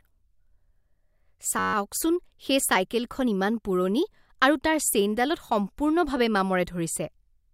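From 1.59 to 1.74 s, the speech freezes into a system hang loop. The computer or driver stalled while the audio hardware kept replaying the same 10.67 ms slice of its ring buffer, which fits a 512-sample buffer. Because the slice is so short, it is heard as a steady buzz at about 94 Hz rather than a stutter. Unlike a dropout, essentially nothing is lost, and unlike hum, the tone exists only while the system is stalled.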